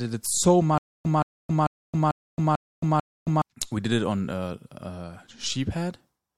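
From 0.78 s to 3.42 s, just after "it so", the speech breaks into a stutter with silent gaps: a burst of about 174 ms plays, then about 270 ms of dead digital silence, and that repeats six times at a steady 444 ms pace until "we did it on" picks up. It sounds like a stream that likely stalled and kept replaying its last fragment on each retry, so whatever was said in that stretch is simply gone.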